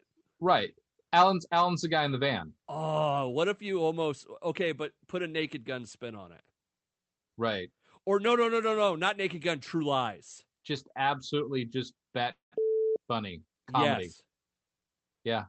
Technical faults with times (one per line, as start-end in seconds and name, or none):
12.31-12.67 call audio freeze
14.78-15.35 jitter buffer speed-up